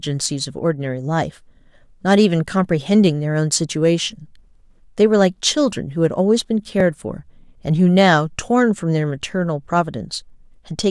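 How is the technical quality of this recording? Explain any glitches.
The recording has one recurring glitch: overlapping chunks. Brief stutters occur at 1.78, 6.80 and 9.32 s. The audio was handled in 2.5 s chunks, each starting slightly early. At each join, 13 ms plays twice, giving a click.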